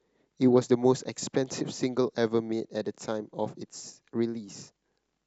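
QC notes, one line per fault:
0.46–0.63 s, DAB burbling: a short patch of noisy blips sits on top of the speech. Weak reception let a small share of bit errors, around a tenth of a percent, slip past the error correction into the MP2 data, so some samples and scale factors decode wrong and individual sub-bands jump in level for up to a frame. The length of the burst points to roughly six damaged frames.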